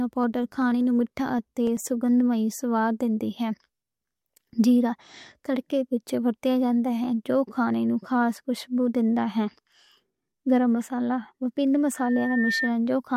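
It's a speech recording with two separate problems. From 0.14 s to 1.87 s there are periodic USB or driver dropouts: regular ticks every 96 ms, about twenty in all, each where a few milliseconds of audio were simply skipped, which points to something stalling the bus or driver on a fixed cycle. Then at 11.95 s a loudspeaker feedback squeal starts, a single 1.8 kHz tone that swells over roughly half a second until it's about as loud as the speech, and it runs to 12.72 s. That's the mic picking up its own speaker and the loop running away at that frequency.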